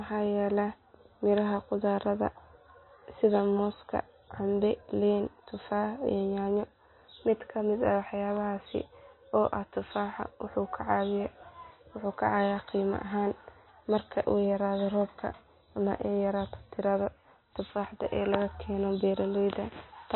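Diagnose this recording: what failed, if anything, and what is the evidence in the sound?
The stage is the codec, most likely MP3 compression at a low bitrate, roughly 24 kbps judging by the damage. Plainly audible throughout the speech, it has a watery, swirling texture with chirpy sibilants. On a spectrogram there is nothing above 4 kHz, and below that the weaker components flicker on and off from frame to frame. With too few bits, the encoder discards quiet frequency lines and cuts the treble entirely.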